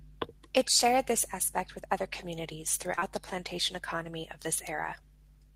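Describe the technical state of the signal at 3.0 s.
At 3.0 s, just after "aspect with other communities", there is short concealed packet loss from 2.95 to 3.03 s. Two back-to-back gaps of about 20 ms each were patched by extending the preceding sound. This leaves a brief smear before "the plantation economy of" resumes.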